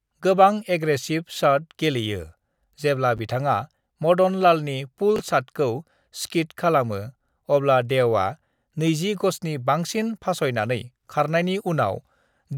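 At 3.17 to 3.19 s there's a brief jumbled blip in the speech. It's chunks out of order: a roughly 10.7 ms slice of audio turned up one chunk late and played after the piece that should follow it. Nothing goes missing, but the swap leaves three hard joins. The same thing happens at 5.16 to 5.20 s, with the slice two chunks late, so the garble lasts a touch longer.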